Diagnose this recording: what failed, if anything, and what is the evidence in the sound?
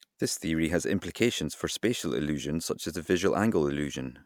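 Nothing failed: no stage of the chain, from wiring and conversion through processing, transmission and playback, leaves any audible fault on this speech recording.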